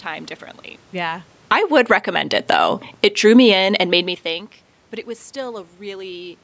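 From 1.36 to 2.11 s the automatic gain is falling. The control judges the input too loud and pulls its gain down by about 14 dB, so speech and room noise sink together, just after the talker shifts position around 1 s. From 2.02 to 2.97 s automatic gain rising recovers about 13 dB, and both swell back up. A gentler fall of about 3 dB runs from 2.88 to 4.59 s. Inside it, at 3.57 to 4.08 s, the input drops by about 22 dB as the talker moves back near 4 s. The gain rises about 5 dB to chase it, partly lifting the background with the voice.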